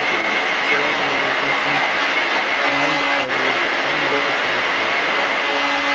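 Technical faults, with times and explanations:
Throughout, other side's voice leaking through: a second voice sits roughly 10 dB above the main speech, likely from loudspeaker playback the echo canceller failed to remove.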